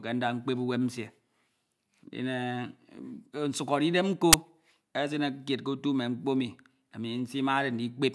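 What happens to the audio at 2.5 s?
Nothing goes wrong at 2.5 s; the speech runs on intact there, with no dropout, click, distortion or other fault at that point.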